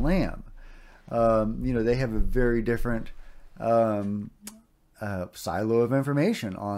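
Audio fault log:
No faults are heard anywhere in this clip. There is nothing to log for any part of it.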